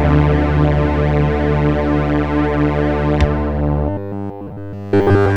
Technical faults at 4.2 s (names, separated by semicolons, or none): robotic sound from repeated short buffers